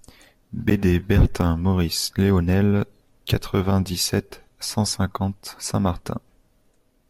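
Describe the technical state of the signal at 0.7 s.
A block of digital silence sits at 0.70 s in the speech, about 11.6 ms of silence. The length fits a 512-sample output buffer that likely went out empty because it was not filled in time. The signal drops straight to silence and jumps back with no fade, so each edge carries a sharp discontinuity. At this length the hole and its two edges merge into a single brief tick or dip.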